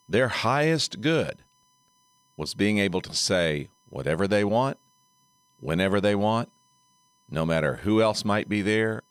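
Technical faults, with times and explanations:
Throughout: USB whine. A thin, steady tone sits at 1 kHz beneath the speech, faint at roughly 40 dB below it, and its pitch never drifts. The steady pitch comes from the USB bus polling in 1 ms frames. Each frame pulls a small burst of current, and that ripple finds its way through the shared power or ground into the audio path, repeating a thousand times a second as a fixed 1 kHz whine.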